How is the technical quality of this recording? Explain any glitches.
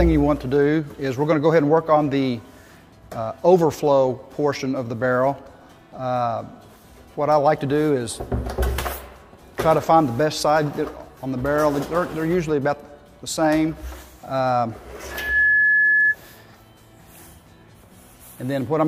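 The recording has one clear fault. From 15.10 to 16.16 s there is loudspeaker feedback squeal. A microphone is picking up its own loudspeaker, and at 1.7 kHz the loop gain passes one. That tone swells within about a third of a second. It ends up roughly 5 dB above the surrounding sound.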